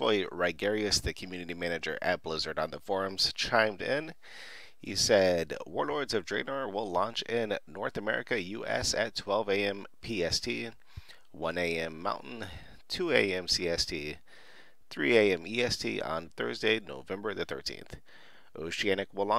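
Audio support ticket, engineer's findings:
No audible defects found on review; nothing to attribute to capture, processing or playback components.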